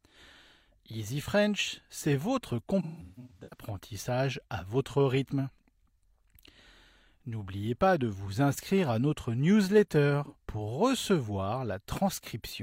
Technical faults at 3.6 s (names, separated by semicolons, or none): AAC frame loss with concealment